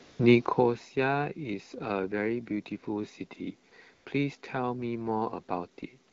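AMR comfort noise appears four times: 0.03 to 0.19 s, 3.69 to 3.71 s, 3.93 to 4.05 s, and at 6.11 s. In each gap the handset's voice activity detection declared silence and stopped sending speech frames, for 160, 20, 120 and 16 ms. The receiver then generated a smooth synthetic hiss from a rough level and spectral estimate. The real background drops out and a steady, even noise switches in, while the clear AMR-WB speech at 12.65 kbit/s resumes around it.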